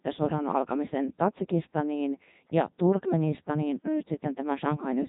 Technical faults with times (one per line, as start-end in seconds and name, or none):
0.00-5.09 Codec 2 vocoder